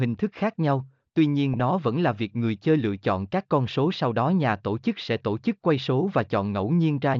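It's a speech clip with a short burst of DAB burbling from 1.54 to 1.60 s, between "thức khác nhau tuy" and "nó vẫn là việc". It comes from uncorrected bit errors from weak reception that corrupt sub-band samples in the MP2 audio.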